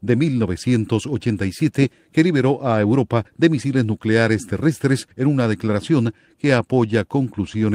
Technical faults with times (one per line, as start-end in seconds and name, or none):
none